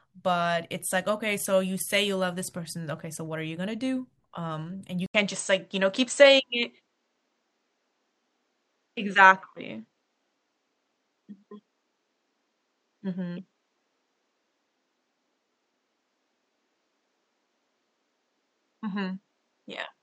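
At 5.06 s, after an 80 ms gap, the speech turns dull to the end, losing everything above 8.1 kHz, shifting about 5 dB in level and gaining faint background noise. That noise floor marks a likely input switched to a poorer device, not filtering.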